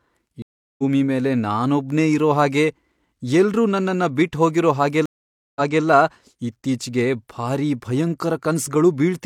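At 0.42 s a stream reconnect cuts the speech: about 0.36 s of silence, then the audio picks up roughly 0.4 s further on, at "ಮೇಲೆ ನಾನೊಬ್ನೇ ಇರೋ ಹಾಗೆ". At 5.06 s, after "ಎಲ್ರೂ ನನ್ನನ್ನ ಬಿಟ್ಹೋಗಿರೋ", a second one brings 0.5 s of silence, then resumes 0.28 s earlier and repeats material. Unlike a plain dropout, the timeline jumps because a fresh decoder restarts mid-stream after the broken connection.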